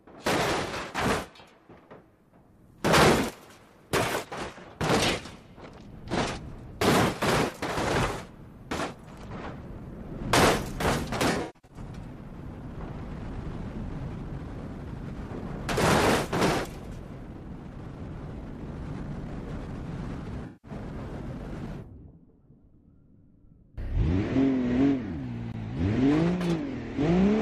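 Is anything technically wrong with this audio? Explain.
Yes, there is AAC frame loss with concealment in two places: from 11.31 to 11.77 s, where about 300 ms of audio is missing in gaps spread over 384 ms (the longest run is roughly 150 ms), and from 20.46 to 20.71 s, where about 171 ms is lost. The decoder covered the missing frames by reusing the last good spectrum with randomised signs or interpolated energy. This leaves smeared, noisy or phasey patches. On a spectrogram these look like blurred, static bands instead of normal detail. On a waveform they look like an unnatural, featureless envelope.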